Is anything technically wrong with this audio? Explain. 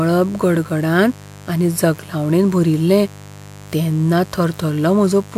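Yes: a mains buzz runs through the whole speech clip, roughly 20 dB below the voice. Sharp switching spikes on the 50 Hz supply, twice per cycle, spray harmonics up into the kilohertz range, so it sounds raspy and edged, unlike a smooth, low, tonal hum.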